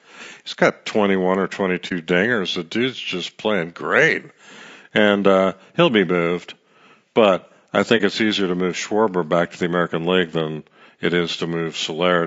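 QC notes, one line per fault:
Throughout: low-delay AAC compression. The speech sounds rough and grainy, with noise filling the gaps between harmonics and a thin, synthetic top end. That's likely AAC-ELD at a low rate, around 32 kbps, whose coarse quantization at that rate leaves noise between the harmonics.
1.88 s and 7.97 s: AAC frame loss with muting. There's a brief soft-edged dip at each point, roughly 40 ms long. A lost frame's spectrum gets zeroed, and the overlapping windows fade the sound out and back in.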